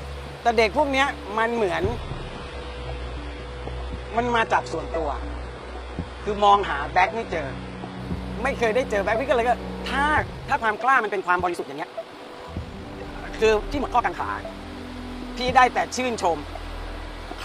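From 2.00 to 8.00 s, the adaptive stream drops to a lower bitrate. Nothing remains above 11 kHz, and artefacts thicken, which fits a switch to roughly 12 kbit/s HE-AAC. From 10.13 to 14.17 s, the audio runs about 1.77 times faster at unchanged pitch, sounding choppy and rushed. This is likely a time-stretched section.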